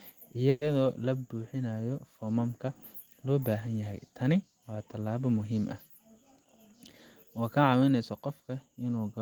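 At 0.49 s the speech stops moving forward and the last sound is stretched into a buzz that fades, lasting until 0.64 s. This is a call audio freeze, likely from packets held up in transit. About 120 ms was filled in. The speech then resumes at "la buuxinayo foomamka loo" with nothing lost, only delayed.

From 7.24 s to 8.29 s the speech runs at 109% speed with unchanged pitch. This is a jitter buffer speed-up. The buffer held too much audio, so tiny pitch-period slices were cut repeatedly, about a tenth of a second in total. It sounds hurried.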